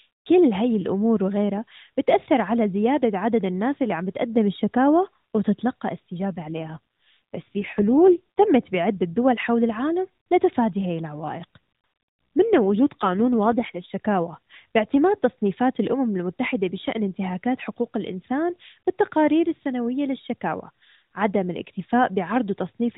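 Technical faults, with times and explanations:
6.29–8.49 s and 12.53–13.91 s, AMR rate drop: the speech turns rougher and more synthetic with no gap or band change, which fits the AMR-NB codec dropping from 12.2 to 5.9 kbps, leaving fewer pulses per frame to model the voice.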